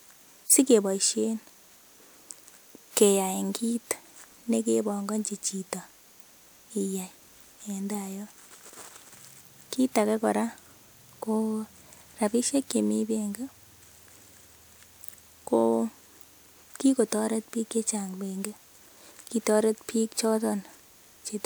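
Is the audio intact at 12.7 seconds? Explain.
Yes, the audio at 12.7 seconds is intact, with no dropout, click, distortion or other fault at that moment.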